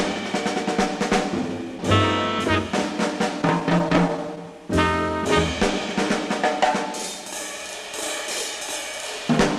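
Between 3.41 and 4.47 s the sound stutters and drags through eleven brief hitches, none longer than 14 ms. These are repeated stalls (stutter): late packets kept emptying the jitter buffer, and each gap was bridged by extending the last sound, 114 ms in total, with nothing lost.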